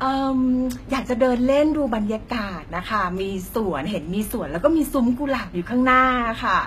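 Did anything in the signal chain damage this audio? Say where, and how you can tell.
Yes. Across the whole speech clip the top end is bright yet wrong: s sounds come out gritty and lispy, with a metallic sheen, and nothing reaches above 14.9 kHz. That points to the codec stage, likely HE-AAC compression at a low bitrate, which fits about 20 kbps. The coder keeps only the lower spectrum and synthesizes the treble by copying lower bands upward under a coarse envelope, so those upper harmonics never match the originals.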